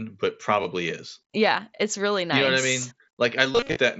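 At 0.63 s, concealed Bluetooth headset packet loss begins: a brief gap of about 15 ms in the link between headset and phone, which fits a couple of lost packets. The receiver fills it by repeating recently received waveform, so it passes almost unnoticed. From 3.52 to 3.76 s a heavier burst strikes. About 172 ms of speech is lost in runs of up to 38 ms. The patched stretches turn into a buzzy, sustained tone with slight warbles as real speech resumes, heard through the 16 kHz mSBC wideband link.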